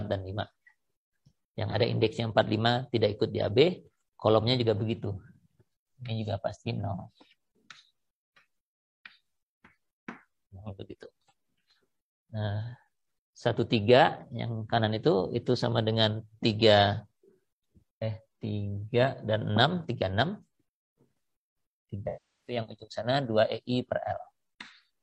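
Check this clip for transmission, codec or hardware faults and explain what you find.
One codec fault, near the end. From 22.07 to 22.56 s, AAC frame loss with concealment: the decoder rebuilds missing frames from the last good spectrum, so sound smears.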